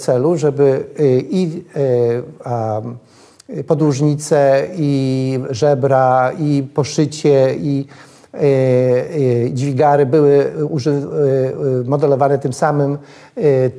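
Nothing here calls for comment, since the audio runs along without a single technical fault to point out anywhere in it.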